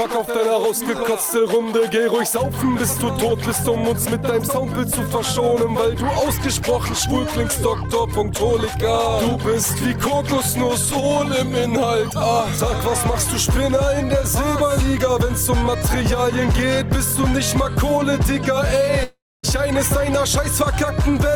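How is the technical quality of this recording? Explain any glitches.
The recording has one clear glitch near the end, a long network dropout from 19.03 to 19.45 s. For about 0.4 s the audio breaks off. The last sound before the gap is stretched into a brief buzzy tail that fades, then about 240 ms of near-silence follows. The audio resumes further on, and that stretch is simply gone. The likely cause is a run of packets that never reached the receiver, which padded the hole with a decaying continuation before going quiet. On a waveform the envelope shrinks to a flat line. On a spectrogram a smeared, fading band gives way to a dark vertical gap before normal content returns.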